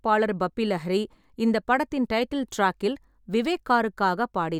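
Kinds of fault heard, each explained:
No faults are audible.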